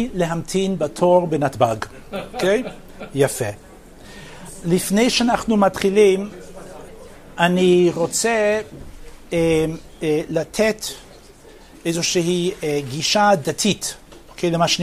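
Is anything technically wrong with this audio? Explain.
No, nothing technically wrong is audible anywhere in this recording.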